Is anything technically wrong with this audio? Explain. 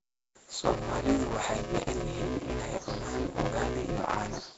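Yes, two faults run through the whole speech clip. Buffer tearing: the writer and the hardware reader have slipped, so about a third of each buffer replays audio around ten milliseconds old, giving a steady 188 Hz robotic buzz, which fits a 256-sample buffer. A hissy, smeared, underwater roughness with nothing above 7.7 kHz is likely Nellymoser compression, which starves weak bands and fills them with noise at a rate that points to about 32 kbps.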